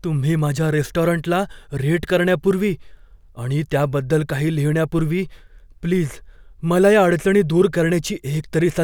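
Speech recording, no technical faults detected.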